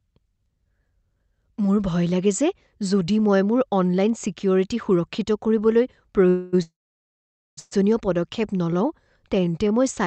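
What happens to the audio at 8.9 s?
At 8.9 s the speech is inside a jitter buffer slow-down that runs from about 8.78 to 9.69 s. The receiver, short of buffered audio, repeated single pitch periods and slivers of pause to build a reserve, adding about 74 ms and playing that stretch at about 93% speed with pitch unchanged. Sounds are drawn out, perhaps with a faint warble. On a spectrogram the harmonics keep their spacing but stretch sideways, still capped near the call path's 8 kHz limit, while the waveform shows near-identical cycles repeated back to back.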